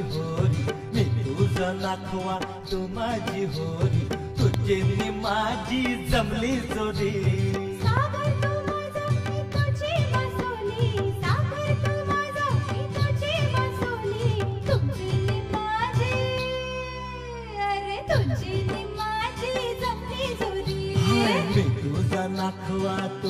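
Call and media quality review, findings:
Loud pop, 4.54–4.56 s and 7.97–7.99 s. Likely cause: a voltage step or pulse from a plug, switch, static discharge or driver glitch entering the signal path. Downstream circuitry shapes each pulse into a single sharp pop lasting about 20 ms, peaking roughly 15 dB above the surrounding sound. The audio continues underneath both pops without interruption.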